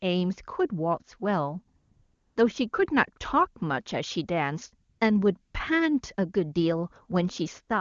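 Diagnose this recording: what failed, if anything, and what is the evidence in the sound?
Pauses at 1.77–2.35, 4.89–4.99 and 5.41–5.53 s switch to a smooth, steady hiss. This is AMR comfort noise: the codec stopped sending speech frames and synthesised the background.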